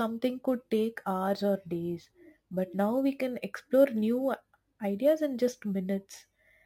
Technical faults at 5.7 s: crude rate conversion

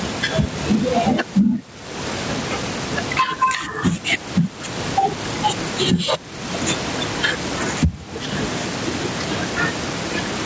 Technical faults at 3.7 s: gain pumping

